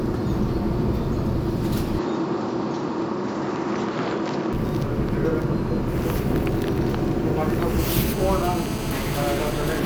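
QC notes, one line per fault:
1.99–4.53 s, input switched to a poorer device. The top end vanishes abruptly, with nothing above 7.6 kHz, and a new noise floor appears about 35 dB below the sound. There is no gap at the switch and the level stays roughly even. A narrower-band microphone likely took over.
7.79–9.80 s, GSM phone buzz. A hard, raspy buzz near 217 Hz, rich in harmonics, sits about 14 dB below the sound. It holds steady, which points to a phone in a call. The circuit rectifies the radio pulses into audio.
8.09–8.13 s, damaged data in a compressed stream. A brief glitch breaks through, during the buzz. Corrupted bytes made the decoder misread frames. It lost sync and resumed at the next valid frame header.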